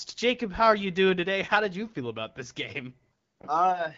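No faults found: the speech passes through the AMR wideband (HD Voice) path at 12.65 kbit/s, a rate where that codec's light coding footprint is expected and nothing further stands out.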